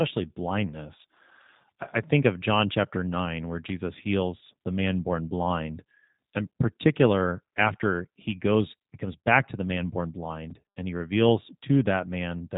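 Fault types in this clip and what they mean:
G.729 codec: A low-rate voice codec, heard here at 8 kbit/s throughout the speech. It does not store the waveform. It models the voice as a vocal tract filter driven by a pitch predictor and a few pulses per frame, then resynthesises it. The damage is plainly audible. The voice sounds rough and slightly synthetic. Everything above about 3.8 kHz is gone, so sibilants are dull and the sound is narrowband, like a phone call.
Overlapping chunks: The audio was handled in blocks, and one block began before the previous one had finished. Where they meet, a short slice of sound plays twice. Here it happens once, between 7.48 and 7.51 s. The doubled piece lasts 21.33 ms. It is heard as a brief stutter or click in the speech. Its position fits a join between 3-second chunks.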